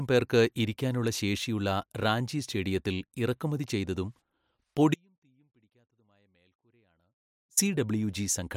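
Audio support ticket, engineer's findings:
Audio dropout to a faint residue, 4.94 to 7.57 s. Speech cuts out abruptly for about 2.6 s. Gap not silent: faint sound persists, about 40 dB below normal level. Likely cause: signal path interrupted upstream while downstream input stayed live, passing only low-level leakage until the feed restored.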